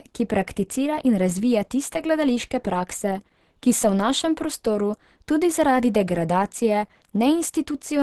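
From start to finish the speech carries Opus compression, likely from a low bitrate encode. The codec appears to sit in its hybrid speech mode, which fits a rate around 16 kbps, so the voice comes across muffled and hoarse, with a grainy roughness that is plainly audible. On a spectrogram the energy stops at about 12.1 kHz, leaving an empty band above, and the upper region looks smeared and noise-filled rather than holding crisp harmonic detail.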